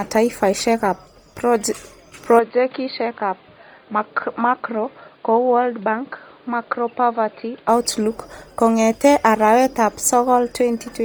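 Throughout, a grainy, breathy edge on the speech, with noise-filled highs rather than a clean top, likely comes from heavy Bluetooth LC3 compression at a low rate, around 32 kbps. From 2.39 to 7.69 s the input switched to a poorer device, likely a headset or another microphone. The band closes above 4.7 kHz, the level falls by about 5 dB and a new noise floor sits roughly 30 dB down. Unlike a codec change, the shift comes with no gap.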